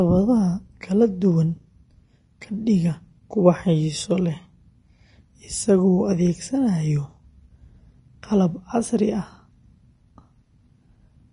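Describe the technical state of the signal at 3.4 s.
At 3.4 s the speech sounds hissy and grainy, with a dull top end: nothing is present above about 10.6 kHz, and the treble that remains has a rough, noisy texture, with consonant onsets smeared. This is present for the whole clip. The likely cause is Vorbis compression at a low setting, consistent with a bitrate near 30 kbps. The codec lowers its cut-off and quantises the upper residue so coarsely that fine detail turns into noise of similar energy.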